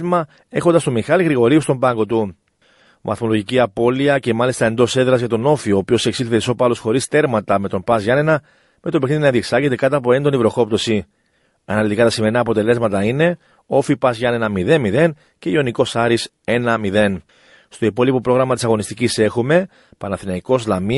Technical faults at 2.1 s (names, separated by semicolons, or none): MP3 compression; pre-echo